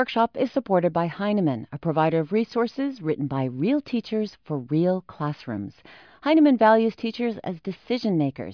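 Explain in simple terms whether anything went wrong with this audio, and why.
Listening to the recording, nothing stood out as having gone wrong.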